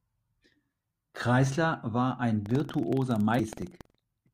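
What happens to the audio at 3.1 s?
At 3.1 s the speech is caught in buffer tearing. It starts at 2.42 s and runs to the end of the clip at 4.33 s. The writer and the reader of the output ring buffer have drifted and cross inside every period. A small slice of each buffer replays audio from about a fifth of a second earlier, with hard joins either side. The result is a steady robotic rattle at 21.5 Hz, which fits a 2048-sample buffer.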